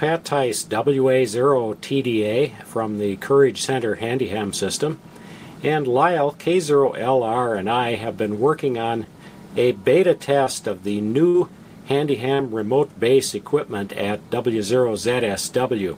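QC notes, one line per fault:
10.44–10.47 s, short concealed packet loss: a quick smear, like a tiny wobble in the sound. Roughly 20 ms of audio never got to the decoder in time, so the receiver papered over the gap by extending whatever was playing just before, about 21 ms of made-up continuation, then crossfaded back into the real signal. It's so short that it reads as a blip, but those 20 ms of the original are simply gone.
11.28–11.35 s, burst of packet loss: a longer hole, about 60 ms of audio lost or arriving too late to play. The receiver covered it with about 57 ms of concealment, carrying the last sound forward and letting it fade, which is why you hear a brief held, decaying stretch instead of a clean cut. Then playback picks up further along, and whatever fell in that 60 ms window is missing.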